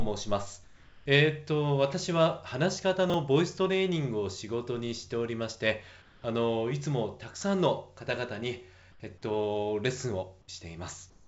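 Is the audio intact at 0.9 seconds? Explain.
No. From 0.64 to 1.06 s, comfort noise replaces the background. The real ambience gives way to a steady, featureless hiss about 4 dB quieter. The likely cause is discontinuous transmission: the sender paused, and the receiver synthesised noise to fill the gap.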